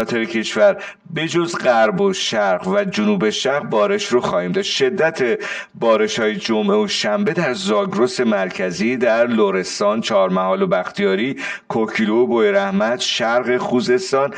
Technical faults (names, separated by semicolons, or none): channel delay (comb filtering)